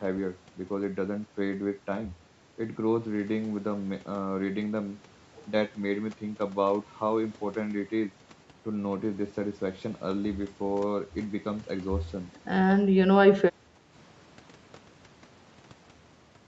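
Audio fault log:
13.53–13.57 s and 13.74–13.80 s, speech suppressed in double talk: the speech briefly ducks twice, first a shallow dip of about 5 dB, then a deeper one of about 10 dB, each only a few tens of milliseconds long. That quick, choppy pull-down is likely the echo canceller hearing both ends active at once, failing to tell the near talker from loudspeaker echo, and clamping down on everything for a moment.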